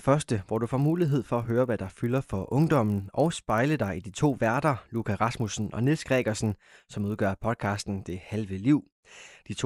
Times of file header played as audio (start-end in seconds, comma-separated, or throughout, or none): none